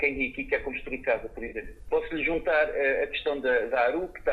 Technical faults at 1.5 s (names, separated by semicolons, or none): AAC frame loss with concealment